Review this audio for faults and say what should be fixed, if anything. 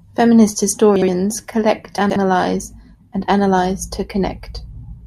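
Chunks out of order occur twice in the speech, at 0.96 to 1.08 s and at 1.98 to 2.16 s. A 60 ms chunk plays one slot late, then two slots late. Nothing is lost, but hard joins jumble the sound. Reorder chunks by sequence number or timestamp before playback or writing.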